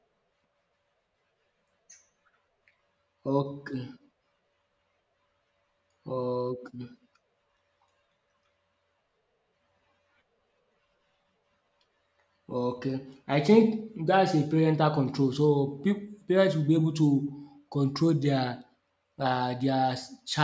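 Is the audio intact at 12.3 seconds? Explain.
Yes, the speech at 12.3 seconds plays through intact, with no audible fault at that moment.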